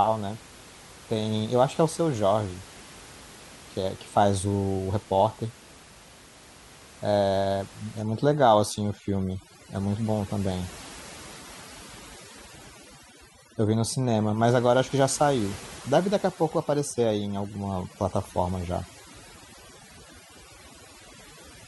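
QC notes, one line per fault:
8.02 to 21.68 s, overdone noise removal: overly aggressive noise reduction mutes bands near the room-noise floor, leaving a lowered, twinkling background.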